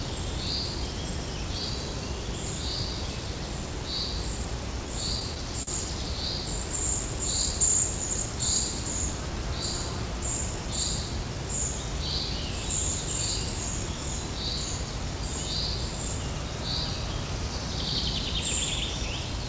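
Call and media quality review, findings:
Repeated stalls (stutter), 5.05–5.69 s: audio drags and catches in five short holds, longest about 44 ms, roughly a tenth of the span. Jitter buffer ran dry as packets arrived late; receiver stretched the last sound to cover. Nothing lost. Band stops at 8 kHz, consistent with G.722 at 64 kbps.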